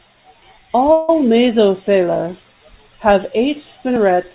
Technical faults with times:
0.92-1.10 call audio freeze

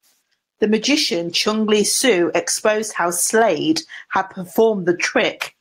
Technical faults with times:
0.00-5.61 gain pumping

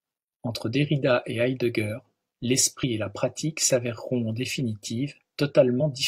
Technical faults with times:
2.79-2.84 damaged data in a compressed stream
5.76-5.81 damaged data in a compressed stream

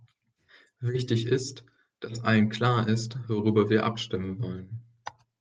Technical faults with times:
none

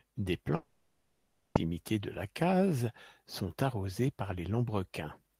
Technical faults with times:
0.55-1.57 long network dropout

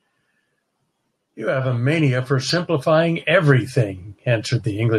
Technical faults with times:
1.48-4.98 automatic gain rising

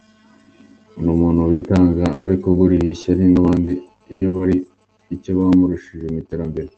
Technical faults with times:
1.51-1.63 burst of packet loss
2.13-3.05 repeated packet loss (robotic sound)
3.65-3.69 short concealed packet loss
4.11-4.35 burst of packet loss
4.37-4.41 short concealed packet loss

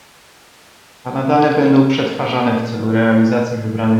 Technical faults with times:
none

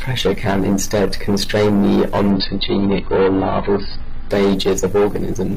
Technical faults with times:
2.30-4.30 adaptive stream at a lower bitrate

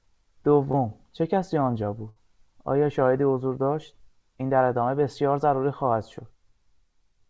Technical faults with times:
0.72-0.75 short concealed packet loss
2.09-2.18 burst of packet loss

